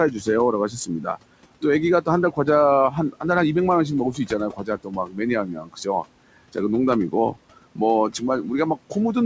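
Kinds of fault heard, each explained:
Noise suppressor artifacts: The room noise, about 16 dB under the speech, sinks away in the pauses and swells back up beneath the talking. A suppressor estimates the steady background and pulls each frequency band down frame by frame, here by as much as about 21 dB.
Speech cut by the noise suppressor: Parts of the speech sound swallowed or faint in six stretches: 0.11–0.27 s, 0.69–1.64 s, 2.01–2.47 s, 2.91–3.24 s, 4.12–6.57 s and 7.09–9.16 s. The suppressor mistook parts of the speech for noise and dimmed them along with the background. The first dip is mild, about 9 dB, while later ones reach about 21 dB, and roughly a second of sound is muffled within the 4.12–6.57 s span.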